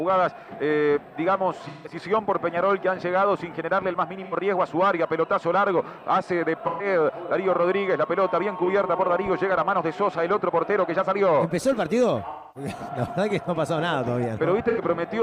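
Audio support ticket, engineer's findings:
AAC frame loss with concealment. Decoder missing short runs of frames, bridging each gap by reusing the last good spectrum with randomised phase and eased energy. Heard as smeared, noisy, phasey patches at 1.67–1.95 s, 4.24–4.34 s, 6.66–6.86 s, 12.30–12.71 s and 14.68–14.80 s. Longest gap at 12.30 s, about 256 ms, fits roughly six lost frames. Shorter ones around 85–170 ms.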